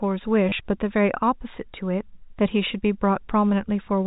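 A speech clip over a G.711 telephone channel, with its 4 kHz ceiling, has packet loss with the last packet repeated at 0.49 to 0.52 s. About 30 ms of audio, which fits three lost 10 ms packets, is replaced by replays that stutter robotically instead of dropping to silence.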